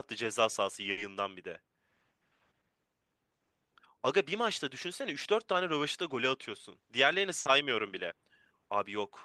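At 0.91 s and 7.39 s, a burst of packet loss cuts about 60 ms from the speech. The receiver fills the gap by holding the last sound as a fading buzz or hiss rather than silence, which sets it apart from a plain dropout.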